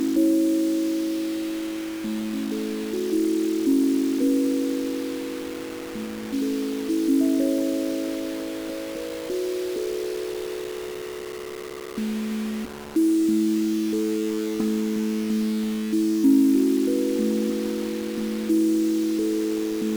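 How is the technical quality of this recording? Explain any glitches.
Technical quality is poor, with one fault present from start to finish. Low bit depth without dither runs through the whole clip: the sound was likely rounded to about 5 bits with no dither, so the error tracks the signal, sitting only around 15 dB down, making quiet passages gritty.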